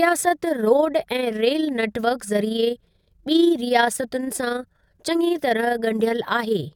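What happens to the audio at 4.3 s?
At 4.3 s the speech carries overlap-add ripple, and it runs through the whole clip rather than starting there. The audio was split into windowed frames and rejoined with overlaps that don't add up to a steady gain. So the level dips and swells once per frame, by about 6 dB, around 30 times a second. The result is a fast flutter, a rough tremolo riding on the speech.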